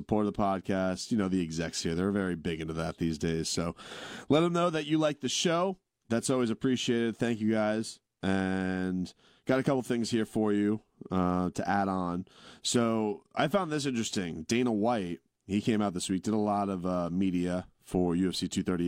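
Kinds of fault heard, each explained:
No technical faults can be heard in this speech recording. There is nothing in the audio that calls for a line of its own.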